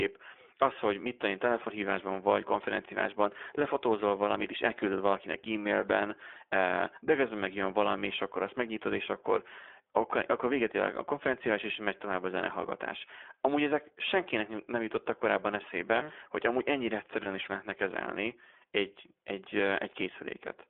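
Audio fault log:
throughout, iLBC codec: speech confined to roughly 300 Hz to 3.5 kHz, slightly rough and synthetic; the 15.2 kbps, 20 ms independent-frame coding keeps speech clear without the smeared, bubbly quality of heavier low-bitrate codecs.
17.24–17.28 s, lost iLBC frames: after "mm hogy amúgy ennyire", a brief held, faintly buzzy vowel replaces the gap instead of silence, consistent with a single lost 20 ms frame; the voice resumes immediately at "is lehetne kezelni egy".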